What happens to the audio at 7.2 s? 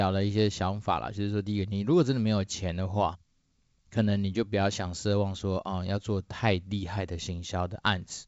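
Nothing goes wrong at 7.2 s: the speech passes through intact there, carried by G.722 wideband telephone coding working as it should at 64 kbit/s.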